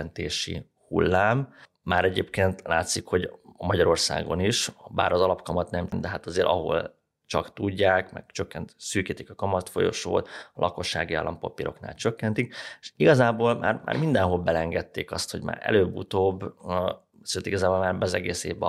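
At 5.92 s the speech hits a patch of damaged data in the compressed stream: some bytes of the encoded file were lost, blanked, overwritten or mixed with foreign data, so the decoder misreads or rejects the frames at that point, loses its place and hunts for the next valid frame header. What reaches the ear is a brief, momentary disturbance in the flow of the audio, a quick break where the decoder recovers and resumes playback.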